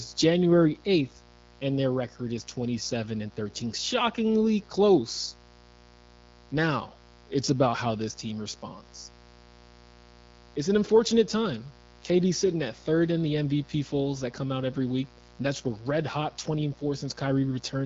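Speech with a mains buzz running the whole way through: a raspy 60 Hz buzz roughly 25 dB under the speech. Switching spikes from a dimmer, rectifier or unshielded lead push its harmonics up into the kilohertz range. The band-limited sound of the AMR wideband (HD Voice) codec is also audible, with nothing above about 7.5 kHz.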